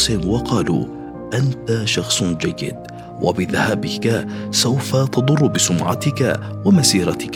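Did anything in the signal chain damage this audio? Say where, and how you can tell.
No, nothing damaged this audio.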